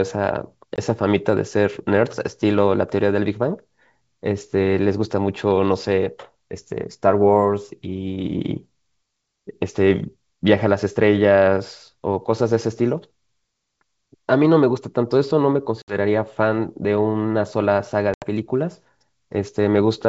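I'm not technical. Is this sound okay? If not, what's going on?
No. The call has packet loss on an ADPCM call: brief silent gaps at 0.76 to 0.79 s, 15.82 to 15.95 s and 18.14 to 18.26 s. Unlike a plain dropout, the speech resumes slightly distorted, because the receiver briefly loses track before settling.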